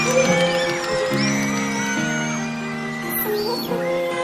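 From start to finish the audio runs at double speed and a full octave (12 semitones) high. This is the wrong sample rate, consistent with 16 kHz material played at 32 kHz. Unlike a pitch shift or time-stretch, speed and pitch rise together by exactly the same ratio.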